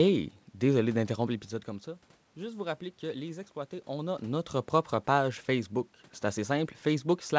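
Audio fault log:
No faults found in this recording.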